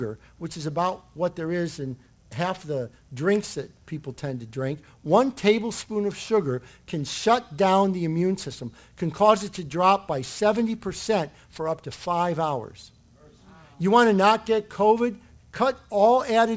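Aliasing runs through the whole clip. The sound points to a rate reduction to around 16 kHz with no anti-alias filter, so content above 8 kHz folds back below it, landing at unrelated frequencies roughly 25 dB under the signal. High-frequency detail turns gritty and metallic.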